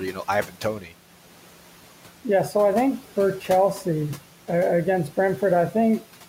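From the start, noise suppressor artifacts are present. The suppressor pulls down bands it judges to be steady noise, by about 12 dB. The room noise, about 18 dB below the speech, sinks between words and rises under them. At 0.47 to 0.64 s, just after "you know", and again at 0.80 to 0.93 s, there is speech cut by the noise suppressor. It mistook parts of the speech for noise and turned them down by up to about 9 dB, so those stretches sound swallowed or faint.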